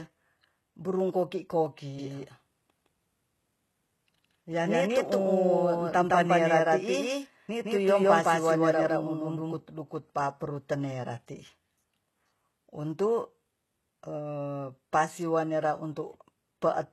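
It's a speech clip, and the whole thing sounds like it likely went through heavy HE-AAC compression: the treble is gritty and metallic, with nothing above 12.3 kHz, which fits a very low bitrate around 16 kbps. From 1.99 to 9.59 s there's a doubled audio track, likely a second copy of the same audio mixed in about 150 ms late at roughly the same level. It starts and stops abruptly, with no room tail.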